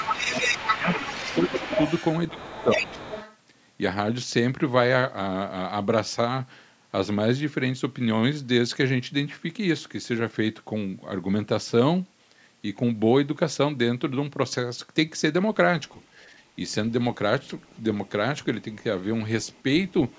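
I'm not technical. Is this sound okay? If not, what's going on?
No. The opening seconds have speech suppressed in double talk. The voice dips or drops out from 0.00 to 1.24 s, again at 1.48 to 1.68 s, and at 2.31 to 2.84 s. Both sides were likely talking at once, and the call's echo control turned the talker down along with the echo.

There is also the other side's voice leaking through. From 0.00 to 3.37 s a second voice is clearly audible, only a little quieter than the talker. Faint scraps return at 15.87 to 16.04 s, 17.49 to 17.79 s and 19.52 to 19.62 s. The likely cause is sound from the talker's loudspeaker that the echo control did not fully remove from the microphone.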